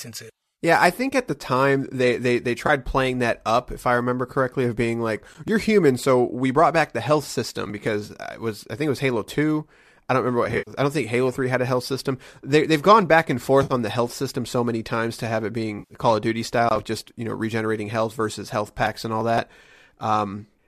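Short smeared, phasey patches at 2.67–2.70, 8.06–8.11, 10.44–10.73, 13.63–13.73 and 15.79–15.94 s are AAC frame loss with concealment. The decoder refilled missing frames from the last good spectrum, scattering 140 ms of gaps at 10.44 s. On a spectrogram these appear as blurred, noise-filled columns, and on a waveform as flattened envelope dips.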